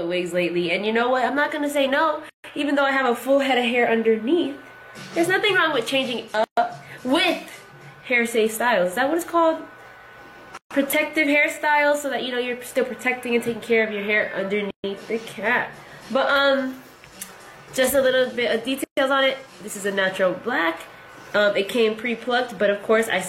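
The audio has a gap at a join of encoded pieces, five times: 2.29, 6.44, 10.57, 14.71 and 18.84 s. Each gap lasts 133 ms, the first 146 ms. The sound then resumes. Chunks about 4 s long were encoded separately and joined untrimmed, leaving encoder delay and end padding.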